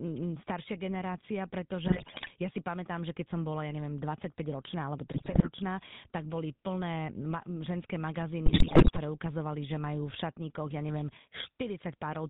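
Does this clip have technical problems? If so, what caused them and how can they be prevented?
Yes. The speech went through the GSM full-rate codec, consistent with the 13 kbps first-generation GSM coder. It rebuilds the voice from a vocal-tract model fed by sparse pulse excitation and cuts everything above 4 kHz, leaving the whole clip buzzy, gravelly and dull. Prevent it by carrying the call over a wideband codec such as AMR-WB, or recording locally instead.

GSM bit errors from a weak radio link corrupted the decoder's filter, pitch and gain values, so the voice bursts into squawks, pops and gargling from 1.86 to 2.33 s (before "ja si pamätám že"), from 5.12 to 5.5 s (before "tak boli plné") and from 8.46 to 8.99 s (before "ukazovali že majú v"). Prevent it with a stronger signal or a link with better error protection and bad-frame concealment.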